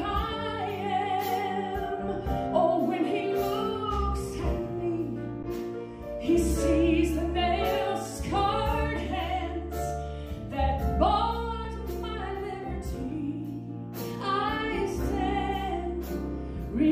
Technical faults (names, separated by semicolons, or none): underrun with held sample